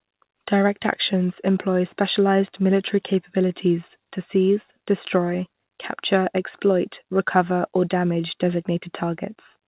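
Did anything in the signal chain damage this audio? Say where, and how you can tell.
Yes. The damage sits at the jitter buffer, from clock drift between sender and receiver. The sender's clock runs roughly one and a half percent slow, so the buffer keeps draining. On the waveform, the syllable spacing stretches unevenly instead of holding a steady rhythm.

The receiver compensates with repeated timing corrections from 0.59 to 9.67 s. It repeats short slices to play at 98% speed and adds around 150 ms overall. These show as brief duplicated patches, with the spectrogram's 4 kHz ceiling from the G.711 mu-law call path unchanged.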